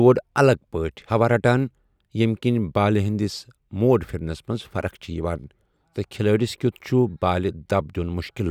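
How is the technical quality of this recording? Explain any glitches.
No technical glitches can be heard in this recording.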